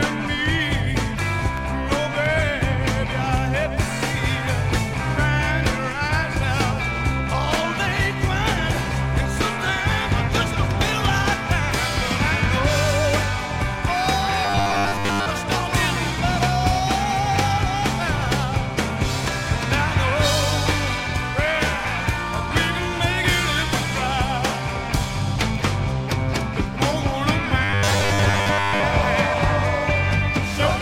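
New audio was likely arriving too seldom, so short buffers of about 10 ms were repeated in place of the missing material, giving robotic sound from 14.45 to 15.27 s and 27.64 to 28.84 s: a rigid metallic buzz fixed at 100 Hz replaces most of the real audio.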